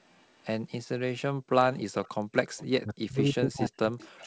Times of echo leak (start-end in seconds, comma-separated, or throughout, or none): 0.12-0.46, 1.75-2.64, 3.99-4.21